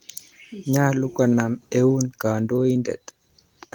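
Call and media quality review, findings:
No faults found in this speech recording. Nothing to escalate for this clip.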